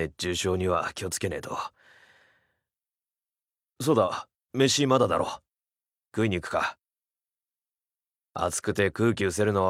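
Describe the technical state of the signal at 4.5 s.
At 4.5 s the signal is intact, with no dropout, distortion, clicks or other technical fault to be heard at that point.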